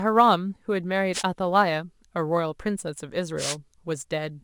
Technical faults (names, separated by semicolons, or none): sample clock jitter; wireless microphone noise hit